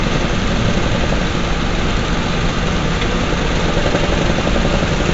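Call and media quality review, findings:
4-bit ADPCM compression, whole clip: heavy damage, gritty hiss tracking every loud moment, crunchy attacks, nothing above 7.8 kHz. Step size can't adapt fast enough; dull top points to a 16 kHz rate, around 64 kbps.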